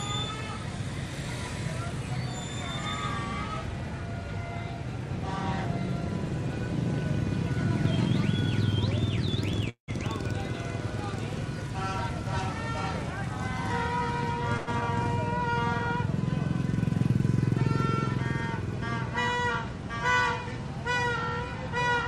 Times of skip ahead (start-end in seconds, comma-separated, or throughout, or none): 14.81-14.83